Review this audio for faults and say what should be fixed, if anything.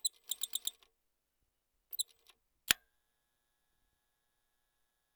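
Nothing needs fixing: the signal holds steady throughout, with no interruptions, distortion or level problems to be heard.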